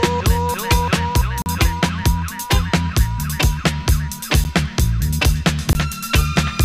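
Blocks of digital silence cut the audio at 1.42–1.46 s (40 ms), 4.44 s (10 ms) and 5.73–5.75 s (20 ms). Samples drop abruptly to silence and return without a fade. The shortest gap is heard as a tick, the longest as a brief hole.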